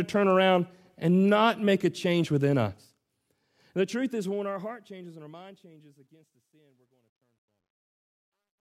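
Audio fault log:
3.61–8.6 s, truncation distortion on a fade: as the speech fades out from about three and a half seconds to the end, the level stage rounds each sample to a coarse grid with no dither, which fits a 12-bit stage. As the level shrinks toward the smallest step, the waveform collapses into a few square stairs. From 5.8 s to the end the tail turns gritty rather than thinning out evenly.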